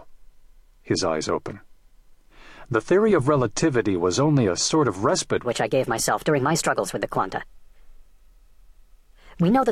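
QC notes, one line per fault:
5.45–9.72 s, section at the wrong speed: from 5.45 s to the end the audio runs 1.27 times too fast, so it sounds hurried and its pitch jumps up by about four semitones at once. Speed and pitch rise together, likely from playback against a mismatched clock.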